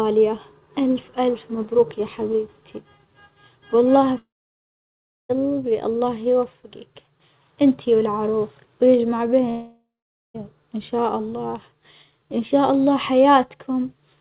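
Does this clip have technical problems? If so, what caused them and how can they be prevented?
Yes, there are two long network dropouts, likely caused by packets failing to arrive for a stretch. From 4.18 to 5.31 s, about 1.1 s of audio is lost. The receiver stretches the last sound into a fading buzz, then goes silent for roughly a second before resuming at "الله يوفجك إنت والعروس". From 9.49 to 10.36 s, right after "يوفجك إنت والعروس ويجمع", it happens again: about 0.86 s is gone, with around half a second of silence before "إن شاء الله". The call's narrowband sound, with nothing above 4 kHz, fits a G.711 link. To prevent these dropouts, put the call on a stable wired connection or prioritise its traffic so packets aren't lost in bursts.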